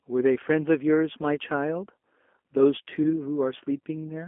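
The whole clip runs through the G.729 codec, and you can plainly hear it. The speech is squeezed into a phone band of roughly 250 Hz to 3.4 kHz, with the slightly rough, synthetic edge of a low-rate speech coder, consistent with 8 kbit/s G.729.

At 1.35 to 1.38 s there's VoIP packet loss concealed by the speech codec. A gap that fits a single 20 ms packet gets patched by the decoder, which carries the last pitch and filter forward. You hear a brief stretched, fading smear there instead of a clean dropout.

It happens again from 3.03 to 3.21 s. The loss is again about one 20 ms packet, but the effect lasts much longer. Each frame builds on the last, so the speech stays weak or distorted while the decoder recovers.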